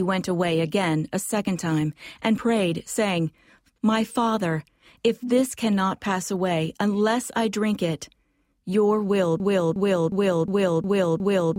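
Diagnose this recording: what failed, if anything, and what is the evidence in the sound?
From 9.40 s to the end there is a broken-record loop: one 0.36 s fragment repeats exactly, back to back, six times. The likely cause is a stalled player or stream resending the last chunk it held, so the audio due in that span is lost.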